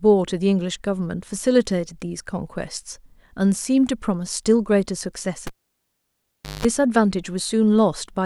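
A pop at 5.47 s silences the speech, then 0.18 s of 50 Hz mains buzz and another pop at 6.65 s: a cable pulled and plugged in.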